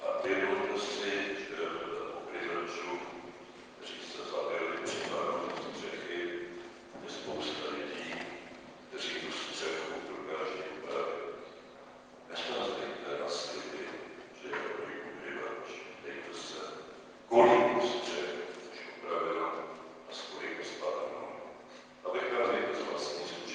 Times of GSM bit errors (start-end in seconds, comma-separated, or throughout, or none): none